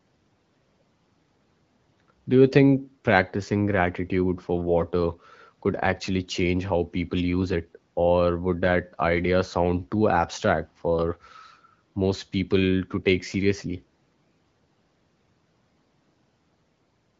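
No technical faults in this speech recording: the room noise sits about 45 dB below the speech, and the band-limited HD Voice character fits AMR wideband coding at around 12.65 kbit/s.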